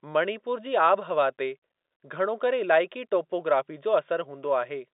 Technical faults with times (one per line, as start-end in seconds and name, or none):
none